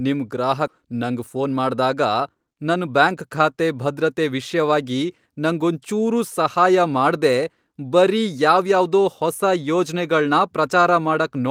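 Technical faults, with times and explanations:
0.67–0.69 s, skip ahead: The speech lurches forward with no audible gap, as if a stretch of talk had simply been cut out and the two edges spliced together. About a second of audio is missing. Later packets were already queued, so the receiver dropped a block, either lost on the way or discarded when the jitter buffer overflowed, and joined what came before directly to what came after. That is why it sounds like an abrupt jump rather than silence.
0.84–3.29 s, jitter buffer speed-up: Here the talking sounds rushed, running at about 108% of normal speed while the pitch stays where it was. The pace settles just before "ಖಾತೆ ಭದ್ರತೆ ವಿಷ್ಯವಾಗಿ ನಂಗೊಂಚೂರೂ". More audio had piled up in the jitter buffer than it aims to hold, so the receiver trimmed many tiny slices of one or a few pitch periods each, about a fifth of a second in total, to bring the delay back down.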